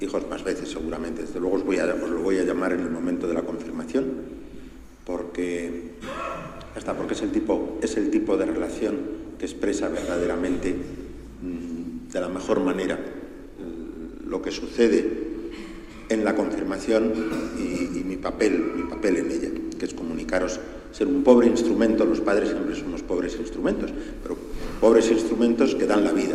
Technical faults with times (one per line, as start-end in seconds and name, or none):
none